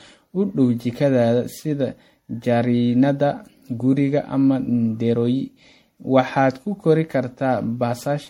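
Generation loss runs throughout the speech: swirly, smeared and hollow, with blurred attacks and nothing above 16.5 kHz. It is likely from around ten rounds of lossy MP3 re-encoding, each on a shifted frame grid, which fits roughly 64 kbit/s.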